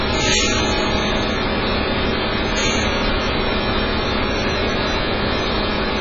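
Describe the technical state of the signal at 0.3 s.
At 0.3 s the audio carries AAC compression artefacts that run through the whole clip: nothing above 7.5 kHz, a dull, smeared top end, and a fizzy, warbling texture. This is likely heavy AAC-LC coding at a very low bitrate, in the region of 12 kbps, which discards upper bands.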